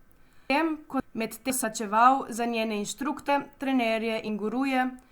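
Between 0.5 and 1.5 s the speech has chunks out of order. The audio falls into 500 ms blocks, and the block that belongs at 0.5 s arrives one block late, so the 1.0 to 1.5 s material plays first. Nothing is missing, but the phrase sounds scrambled, with hard joins at 0.5, 1.0 and 1.5 s. Jumping back in time and replaying displaced speech is what separates this from a dropout or a skip, which only ever lose audio.

Compressed frames skipped follow at 1.63 s, about 150 ms lost, at 3.28 s just after "za njene", about 200 ms lost, and at 4.27 s, a short loss of about 50 ms. Each time the speech jumps forward by a whole multiple of a 23.2 ms frame, which points to several frames going missing or being rejected by the decoder. The absence of any reordering separates these from the earlier jumbled stretch.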